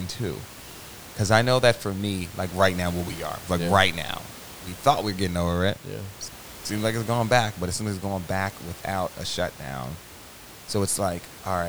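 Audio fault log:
No faults turn up anywhere in the recording. A low room noise sits about 18 dB below the speech and belongs to the space around the microphone.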